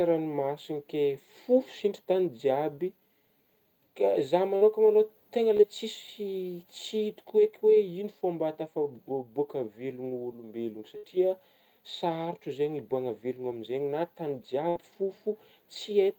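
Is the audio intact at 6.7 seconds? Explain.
Yes, the speech at 6.7 seconds plays through intact, with no audible fault at that moment.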